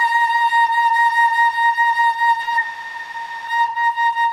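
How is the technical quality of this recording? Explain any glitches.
Two network-timing glitches interrupt the music, both adding delay rather than removing anything.

At 2.41–2.44 s there is a short stall from a late packet: the jitter buffer briefly ran dry, and the receiver stretched the last sound about 20 ms until the packet arrived. A held moment with a faint buzz or dip, and unlike a dropout, nothing is skipped.

From 2.61 to 3.48 s comes a call audio freeze, likely from packets held up in transit. The last sound is extended for 860 ms as a fading buzz or hiss that never reaches silence, then the music resumes where it stopped. Its length separates it from the brief stall.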